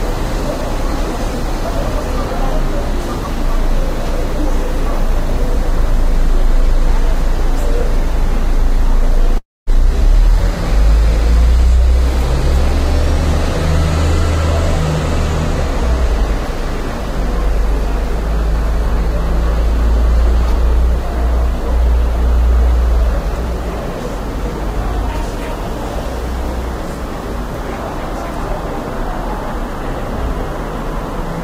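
At 9.37 s the sound cuts out until about 9.70 s, most likely a long network dropout. The last bit of audio gets stretched into a fading buzz, settles into roughly 220 ms of silence, then picks up again with about 300 ms simply gone.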